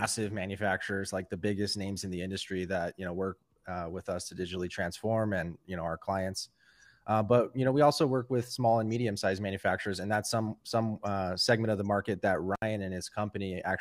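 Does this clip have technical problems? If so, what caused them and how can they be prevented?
Yes, there's an intermittent contact fault near the end of the speech, from about 12.55 to 12.62 s. A loose cable or plug briefly lost its connection, so the signal drops out for roughly 66 ms, with a crackle as the contact breaks and again as it remakes, and faint hiss while the line is open. To prevent it, check that connectors seat firmly, replace worn leads, and add strain relief so cables can't get tugged mid-take.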